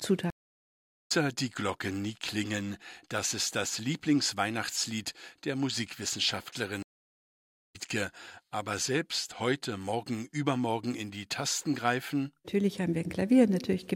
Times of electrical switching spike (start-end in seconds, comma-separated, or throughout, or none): none